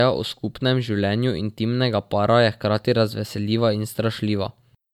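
From start to finish the speech carries generation loss. It has a swirly, hollow character and smeared consonant attacks, more than a single encode at this quality would produce. The likely cause is the audio being decoded and re-encoded as MP3 about three times, each pass requantising on a shifted frame grid so the errors stack. The top end stops near 20.1 kHz, which points to rates of roughly 150 kbit/s.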